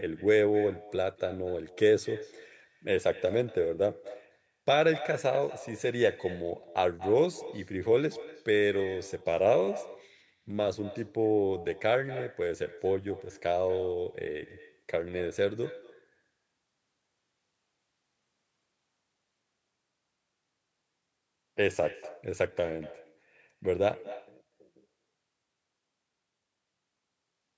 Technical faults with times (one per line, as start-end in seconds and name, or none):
0.00-27.57 echo with no canceller